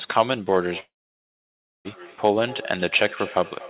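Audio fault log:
0.65–3.70 s feedback echo between two devices: discrete repeats return about every fifth of a second, thinning and ringing, peaking about 18 dB below the speech. A second device is re-sending the sound, unlike smooth room reverberation.
0.80–1.88 s long network dropout: the last sound drags on as a fading buzz or hiss, then 0.96 s of silence, and the audio resumes with material missing, likely from packets never arriving.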